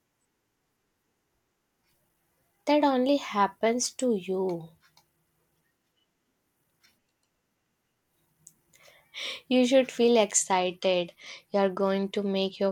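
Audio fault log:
10.37–12.71 s, Bluetooth SBC bit pool drop: right after "should feel" the top end goes dull and a gritty hiss creeps in to the end, which fits the bit pool sliding from around 28 to 13, roughly 102 kbps, starving the upper sub-bands and coarsening the rest.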